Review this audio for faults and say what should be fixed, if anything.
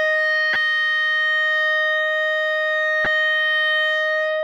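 Two short glitches break into the music, from 0.53 to 0.56 s and again from 3.03 to 3.07 s, each lasting about 30 ms. These come from damaged data in the compressed stream. At those points the encoded bytes are corrupt, so the decoder misreads the affected frames, loses sync and scans for the next valid frame header. Prevent this by checking stream integrity in transit and storage, with checksums or CRC-protected frames, and re-fetching any corrupted segments.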